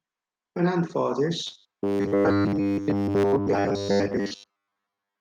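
A microphone volume step-up at 1.11 s lifts the speech and the background together by about 3 dB in a single jump, the kind of abrupt change made when call software decides the input is too quiet and raises the device level at once.

Robotic sound from repeated short buffers runs from 1.47 s to the end. The speech becomes a rigid, metallic buzz at 100 Hz that still loosely tracks the syllables. The likely cause is audio arriving too seldom, with about 10 ms fragments repeated in place of most of the real signal.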